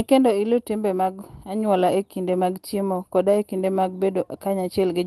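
No technical faults can be heard anywhere in this clip.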